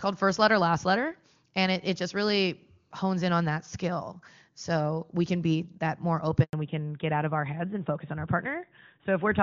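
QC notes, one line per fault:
6.43 to 6.53 s, handover gap: right after "can be that more" the speech cuts out for 100 ms as the call switches networks, so that bit is simply lost.
6.53 s to end, fallback to narrowband: the crisp HD Voice sound from before drops to an older narrowband codec, likely AMR-NB, so nothing above 4 kHz survives and the speech turns duller.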